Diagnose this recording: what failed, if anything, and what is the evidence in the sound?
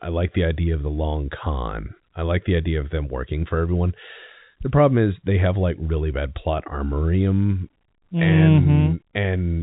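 Nothing has failed: the speech carries the narrow band of G.711 telephone coding working as intended, with no content above 3.8 kHz, and no fault can be heard anywhere in the recording.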